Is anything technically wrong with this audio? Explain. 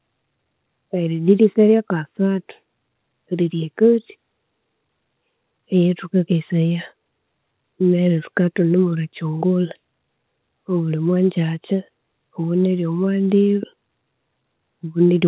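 No, nothing is technically wrong.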